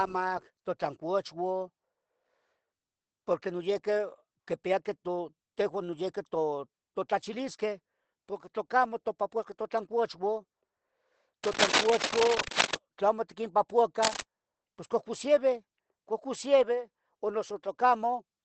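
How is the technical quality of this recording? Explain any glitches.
The quality is poor: the speech is compressed throughout and scratched twice. Opus voice compression runs through the whole clip. Its SILK coder, at what sounds like about 12 kbps, cuts everything above 8.7 kHz and codes coarsely, so speech sounds muffled and hoarse. Cable scratch noise appears at 11.44–12.77 s and 14.02–14.21 s. It is likely a worn connector being moved, which adds dense rustling bursts about as loud as the speech.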